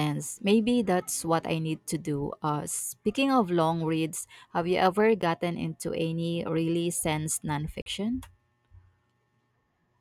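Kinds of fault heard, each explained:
Block of digital silence: at 5.22 s and from 7.82 to 7.86 s, the speech drops abruptly to silence and snaps back with no fade. This happens when a run of output samples is left empty, typically because processing missed its deadline. The first gap lasts about 10.7 ms and is heard as a tick. The second lasts about 42.7 ms and is heard as a short hole. These lengths fit a 512-sample and a 2048-sample buffer.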